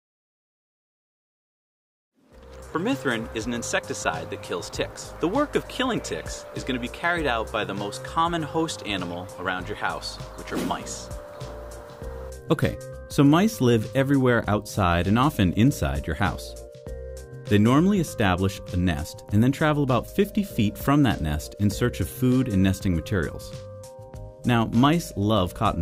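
No technical faults are audible.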